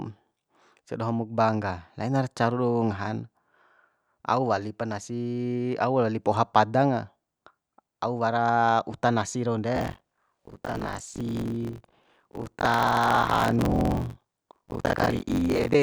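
From 9.75 s to 15.76 s the speech takes on a robotic buzz at about 47 Hz, which fits a 1024-sample buffer. This is buffer tearing: writer and reader have slipped, so most of each buffer replays audio about 40 ms old, hard-joined on both sides.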